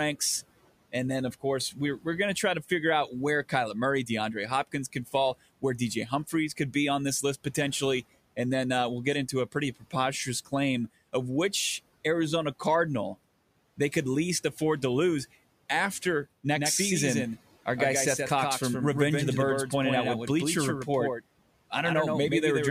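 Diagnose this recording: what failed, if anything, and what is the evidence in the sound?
Call processing: speech cut by the noise suppressor at 4.93 to 5.14 s, dipping about 9 dB; the spectrogram shows speech energy briefly sinking toward the room-noise floor.

Doubled audio track from 16.55 s, after "afford to lose after", to the end: a clean copy about 5 dB quieter trails by roughly 150 ms, likely a second capture path. The waveform shows each syllable repeated, with an abrupt onset.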